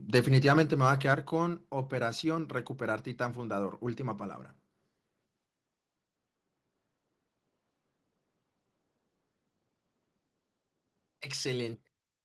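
From 0.15 to 1.12 s the speech has microphone overload: loud syllables come out with a harsh, crackly edge because their peaks are flattened. The input was likely set about 4 dB too hot, so a small fraction of samples hit the converter's ceiling.

At 1.14 s there's a microphone volume step-down: voice and background both drop abruptly by about 6 dB. That's likely the call software spotting the clipping and pulling the device's input gain down in one go, which is why the change is so sudden.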